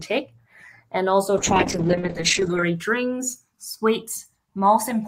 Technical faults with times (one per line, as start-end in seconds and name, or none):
0.00-5.08 channels drifting apart
1.38-2.69 call bitrate drop